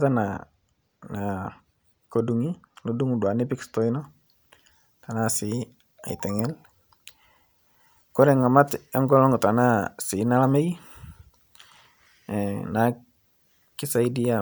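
From 3.99 s to the end of the clip, the speech shows pre-emphasis left on. The treble was lifted ahead of recording or transmission, and the complementary de-emphasis was never applied, so the boost stays in the signal. The lift reaches about 10 dB at 10 kHz relative to 1 kHz, a shape that fits a 50 µs FM emphasis curve. The result sounds thin and overly bright, with exaggerated sibilance.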